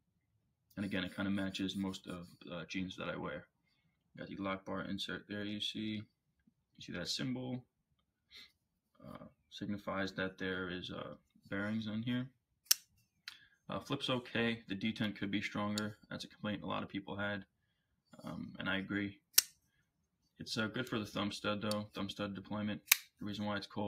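Noise suppressor applied to music or sounds, throughout: a speech-oriented suppressor treats sustained tones, ambience and reverb as noise and pulls them down. Level swings by about 15 dB, so attacks pass while held sound and tails sink, giving a pumping, thinned texture.

Sound cut by the noise suppressor, at 0.0–0.77 s, 3.46–4.18 s, 6.06–6.81 s, 7.63–9.51 s, 11.18–11.47 s, 12.3–13.69 s, 17.45–18.17 s and 19.2–20.4 s: the suppressor misread these sounds as noise and cut them by about 16 to 19 dB, so they sink.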